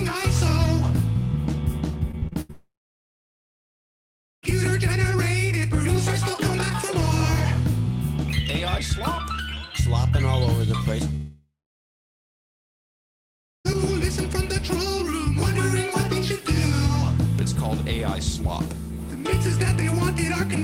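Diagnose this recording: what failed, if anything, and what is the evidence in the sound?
From 2.11 to 2.51 s the sound turns choppy, with five short holes, the longest 77 ms, smoothed over by repeating the preceding audio. Together they cover about 44% of that span. This is repeated packet loss (robotic sound) at the network stage: packets arrive late or not at all, and the receiver's concealment patches each gap by extending the last waveform before the next gap hits, which produces the choppiness.

Right after, from 2.51 to 4.45 s, the audio gives way to a brief fading buzz and then about 1.75 s of silence. The same pattern returns from 11.16 to 13.67 s, with a somewhat longer buzz tail before about 2.17 s of silence. In both places the sound resumes further along, with the gap's content simply gone. This is most likely a long network dropout: the stream stopped arriving, concealment stretched the final sound until it decayed, and the receiver then played nothing until packets flowed again.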